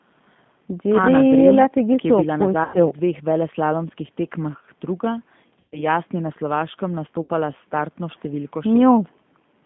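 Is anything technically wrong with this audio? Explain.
Yes. G.729 codec damage runs throughout: the speech is rebuilt from a vocal tract filter, pitch predictor and sparse pulses, which fits an 8 kbit/s codec. The sound is confined to roughly 150 Hz to 3.5 kHz and is plainly rough and synthetic.

VoIP packet loss concealed by the speech codec occurs at 2.64 to 2.79 s, 5.60 to 5.85 s and 7.23 to 7.31 s. About 100, 120 and 60 ms of audio went missing. The decoder extrapolated from its last pitch and filter, so each gap becomes a fading buzzy tone or coloured noise that stays weak after the audio returns.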